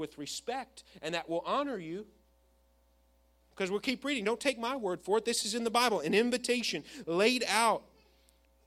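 A speech recording with no audible technical faults.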